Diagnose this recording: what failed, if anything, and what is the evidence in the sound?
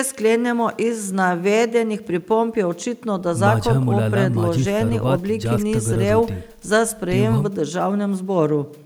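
Nothing stood out on listening to the speech; no stage of the chain gives any audible sign of having failed.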